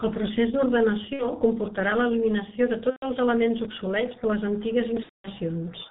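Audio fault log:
throughout G.723.1 codec. The speech is muffled and hoarse, with nothing above 4 kHz. Consonants blur badly. The sound fits a rate near 6.3 kbit/s with 30 ms frames, where a slowly updated voice model smears fast changes.
1.13–1.28, 2.90–3.06, 5.03–5.28 VoIP packet loss concealed by the speech codec. Gaps of about 60, 120 and 210 ms, which fit two, four and seven lost 30 ms frames. The decoder stretches its last sound into a fading buzzy tone or coloured noise. The voice stays weak briefly afterwards.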